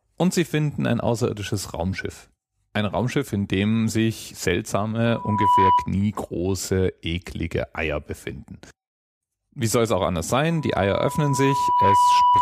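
Loudspeaker feedback squeal appears at 5.05–5.91 s and again after "soll es auch anders" from 10.51 s to the end. The microphone is picking up its own loudspeaker and the loop gain exceeds one at 986 Hz. That tone swells in under half a second the first time and about one and a half seconds the second time, sitting several decibels above the speech.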